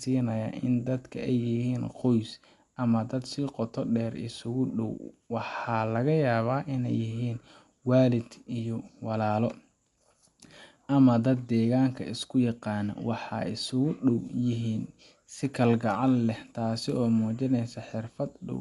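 Throughout the speech the sound is dull and band-limited, with nothing above 11.4 kHz and a rough, fluttering noise clinging to tonal parts. This is likely Dolby Digital compression at a low bitrate, consistent with 64 kbps, where unfunded frequency lines are filled with dither noise.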